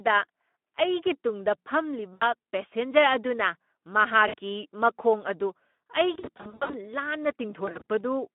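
Speex codec damage runs through the whole clip. The speech sits in a narrow band from 200 Hz to 3.4 kHz and has the hoarse, grainy roughness of a CELP coder short of bits for its excitation, which fits a Speex stream at around 11 kbps. Unlike the swirly, watery artefacts of a transform codec, the coarseness here stays tied to the voicing itself.

VoIP packet loss concealed by the speech codec occurs four times. At 2.14 s about 80 ms are lost, and at 4.27 s about 60 ms. From 6.13 to 6.78 s, 340 ms of losses are scattered over roughly 600 ms, with no single gap longer than 60 ms. From 7.65 to 7.84 s, 100 ms are lost in runs of up to 40 ms. Each time, the decoder keeps extending its last pitch and filter, so the missing audio becomes a buzzy tone or coloured noise that fades, rather than a silent gap or click. The sound stays weak and smeared for a short while after the packets return, which is what distinguishes this from a plain dropout.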